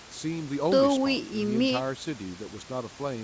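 No technical faults can be heard anywhere in this speech. Nothing reaches above 8 kHz, which fits a wideband call codec such as G.722, and a faint room noise sits about 26 dB below the speech.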